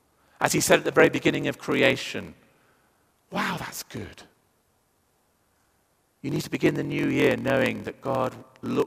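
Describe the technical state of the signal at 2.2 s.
At 2.2 s the speech carries a block size mismatch (padded), present throughout the clip. Each block is written short and read as 1024 samples, with zeros filling the gap. This causes a 43.1 Hz buzz. The speech also runs at 0.938 speed, with its timbre kept.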